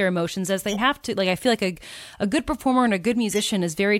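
A corrupt frame decoded at 0.68 to 0.79 s, and another at 3.33 to 3.41 s, break into the speech as short chirpy bursts of noise. Flipped bits in the compressed data led the decoder to apply wrong gains and misread codes, scattering energy into the wrong frequencies for each damaged frame. The first burst, peaking near -20 dBFS, spans what sounds like two frames. The second is a single, louder blip near -10 dBFS.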